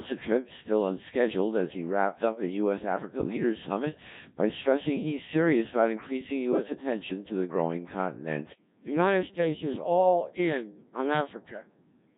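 From the start, the speech runs through a Codec 2 vocoder at about 1.3 kbit/s. The voice is rebuilt from pitch and spectral-envelope parameters, so it sounds heavily robotic and buzzy. From 3.16 to 3.37 s, bit errors on digital voice radio corrupt four vocoder frames, with an error rate of roughly 4 percent. Pitch, level and timbre jump, and the audio breaks into warbling gibberish.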